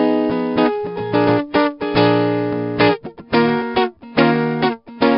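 A music clip with 4-bit ADPCM compression throughout. A gritty hiss rides on every loud passage and tracks its level. Sharp attacks distort where the step size lags. Nothing is heard above 5.3 kHz, which fits a low sample rate near 11 kHz.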